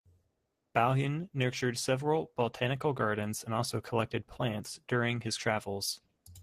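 A short bit of speech, and nothing technically wrong turns up anywhere in it.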